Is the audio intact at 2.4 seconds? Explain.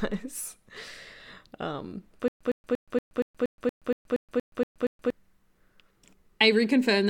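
No. A stutter with silent gaps runs from 2.28 to 5.10 s. A stall likely made playback repeat its last fragment at each retry and then run dry. A 111 ms burst repeats 12 times, each followed by about 124 ms of silence, and the audio meant for that span is lost.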